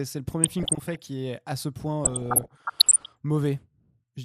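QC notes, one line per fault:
Throughout: MP2 compression. The speech sounds dull and grainy, with a gurgling roughness. The likely cause is MPEG Layer II coding at a low rate, consistent with about 80 kbps. Too few bits means upper sub-bands are dropped or coarsely quantised. On a spectrogram the top end stops abruptly and flickers in flat, equal-width bands. Short rectangular patches appear and vanish from frame to frame instead of shading off smoothly.
0.44–1.06 s and 2.05–3.06 s: DAB burbling. Short blips of noise ride over the speech, ending just before "est à ce point" in the first stretch and starting just after it in the second. The second stretch is longer and denser. Bit errors at roughly 0.7 and 1 percent slip past error correction and corrupt sub-band samples and scale factors, so single bands jump in level for up to a frame. The spectrogram shows isolated bright band-shaped blocks, each at most one frame long.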